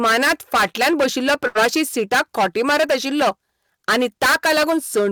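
Hard clipping runs through the whole speech clip. The level is driven about 21 dB past what the chain can pass, so roughly a fifth of samples are sheared flat. The result is a harsh fuzz on every loud syllable, with squared-off waveform tops and harmonics smeared high up the spectrogram.

A burst of packet loss strikes from 1.47 to 1.57 s. About 80 ms of audio never arrived, and the receiver stretched the last sound over roughly 76 ms while fading it, giving a held buzz or hiss. On a spectrogram, a decaying smear precedes a jump where speech resumes further along.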